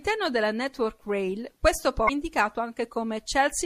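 The speech carries plainly audible MP3 compression throughout. Quiet detail flickers in and out between frames, giving a watery, swirly edge. S sounds turn metallic. The likely cause is a low bitrate, around 64 kbps.

From 2.05 to 2.10 s there is damaged data in the compressed stream. Corrupt bytes make the decoder misread frames and lose sync. It then hunts for the next valid frame. This is heard as a brief glitch lasting about 40 ms.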